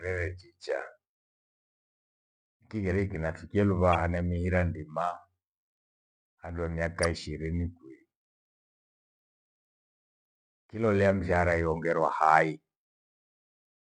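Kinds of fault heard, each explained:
Corrupt frame decoded: at 3.93–3.95 s, just after "kiriki nafikilu", and at 7.03–7.06 s, damaged compressed frames were played anyway, throwing energy to wrong frequencies as brief disturbances. The first, about one frame, peaks near -15 dBFS; the second, spanning a few frames, is quieter.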